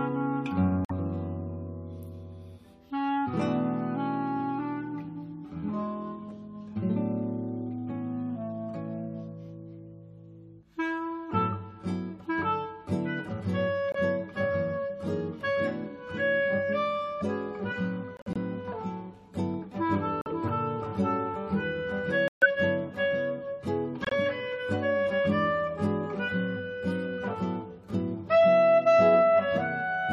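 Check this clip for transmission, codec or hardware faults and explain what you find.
The audio drops out abruptly six times with corrupt frame muted faults, at 0.85–0.91 s, 13.92–13.96 s, 18.17–18.38 s, 20.21–20.27 s, 22.28–22.45 s and 24.05–24.13 s. Damaged compressed frames were rejected by the decoder and replaced with silence, giving hard-edged gaps from 42 to 206 ms. Timing stays intact. On a waveform each is a flat line with sheer edges; a spectrogram shows blank full-band vertical bands.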